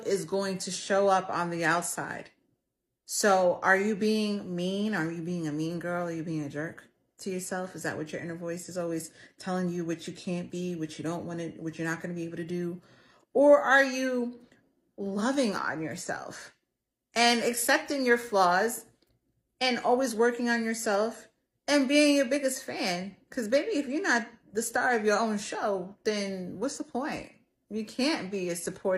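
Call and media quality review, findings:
Clock slip clicks, 0.18 to 28.9 s. Faint, evenly spaced ticks, roughly ten per second, clearest on loud sustained passages and absent in silences. Likely two unsynchronised device clocks, around 200 ppm apart. One sample is dropped or repeated at each slip.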